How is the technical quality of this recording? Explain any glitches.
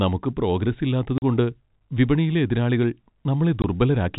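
The recording has two dropouts from packet loss filled with silence, heard over G.711 telephone-band coding. At 1.18 to 1.22 s, just after "നമുക്ക് പ്രോഗ്രസ്", and again at 3.62 to 3.64 s, audio packets never arrived and the receiver inserted digital silence. The speech is cut by holes of 40 ms and 20 ms, consistent with two lost 20 ms packets and then one, and their edges are abrupt.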